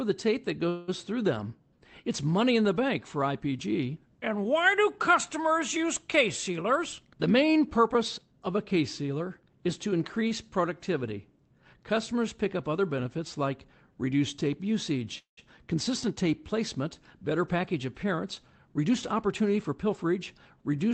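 Just after "the tape that", from 0.69 to 0.90 s, there is a call audio freeze. The last sound is carried on as a fading buzz for about 184 ms. Then the speech resumes with "through them". This is likely a jitter buffer that ran empty while packets were held up in transit. Nothing is lost. A gap has simply been inserted, and everything after it arrives later.

From 6.50 to 8.77 s comes a jitter buffer speed-up. The speech runs at 108% speed with its pitch unchanged, so it sounds hurried. The buffer held more audio than its target. To shed the extra delay, the receiver cut many short pitch-period pieces, roughly a fifth of a second in total.

After "sealer is to", from 10.28 to 10.32 s, there is a short stall from a late packet. One sound is held about 26 ms too long, with a small buzz, while the receiver waits. It then continues from the same place, and nothing is missing.

A second call audio freeze runs from 15.18 to 15.39 s, between "benefits like reduced tape" and "consistent tape placement". 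The held sound fades into about 130 ms of silence, adding 192 ms in all. Again the likely cause is an empty jitter buffer.

From 18.77 to 20.23 s there is another jitter buffer speed-up. The speech runs at 109% speed, and roughly 150 ms is trimmed out.

Throughout the clip, the Opus call codec's coding noise and missing top end can be heard. The sound points to a low bitrate near 20 kbps and a cutoff near 8 kHz.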